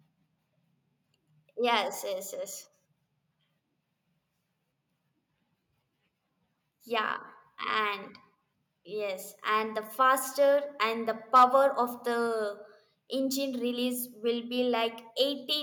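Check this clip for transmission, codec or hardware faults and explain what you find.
Two hardware-side faults show up in this speech clip, both within about a second of each other near the end.

Microphone overload, from 11.35 to 11.44 s, just after "the faster and the": the loudest stretch drives the input roughly 3 dB past full scale, so around a tenth of the samples there are flattened against the ceiling, likely from an input level set too hot for the converter. It sounds harsh and crackly. The waveform shows squared-off, flat-topped peaks, and the spectrogram shows a brief vertical smear of broadband energy above the normal harmonics.

Microphone volume stepped down, at 12.27 s: the whole signal, voice and background alike, drops by about 2 dB in a single instant and stays there. This is likely the call software reacting to the overload a moment earlier by lowering the device's input volume once. 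You hear a sudden, slight dip in loudness. The waveform envelope drops abruptly, and the spectrogram turns uniformly a shade darker across all frequencies from that point on.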